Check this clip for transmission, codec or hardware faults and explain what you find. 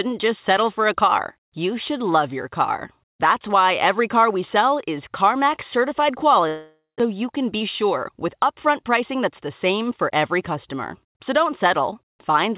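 Two faults stand out, a long network dropout followed shortly by a jitter buffer speed-up, both heard through a narrowband G.711 mu-law path with nothing above 4 kHz.

Long network dropout, 6.48 to 7.02 s, just before "you can": the sound smears into a fading buzz or hiss, then about 150 ms of near-silence, and roughly 0.4 s never returns. The likely cause is lost packets concealed by extending the last audio. Unlike a brief packet loss, the fill decays to silence and content is skipped.

Jitter buffer speed-up, 7.55 to 8.38 s, right after "you can": delivery runs about 6% fast at unchanged pitch, hurried but not chipmunk-like. The buffer, overfilled after the dropout's roughly 100 ms delay shift, trimmed about 50 ms in pitch-period pieces. A resampling error would shift pitch too.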